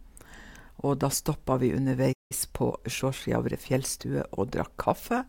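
Just after "da stoppa vi", at 2.12 s, the speech cuts to silence for about 174 ms, a playback stall, likely the player starving for data. The speech resumes at 2.32 s.

From 2.32 to 4.06 s comes time-compressed catch-up. The player trims its backlog by splicing out small slices, so delivery runs about 1.1 times faster. Pitch stays normal, which separates this from a resampling speed-up that would raise it.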